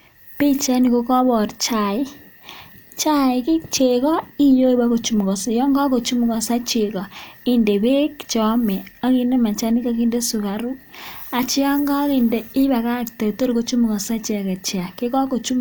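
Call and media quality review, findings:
No findings: the call and media quality review turned up no faults in this speech.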